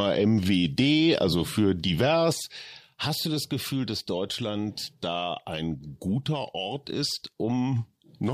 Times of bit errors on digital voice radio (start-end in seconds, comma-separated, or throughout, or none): none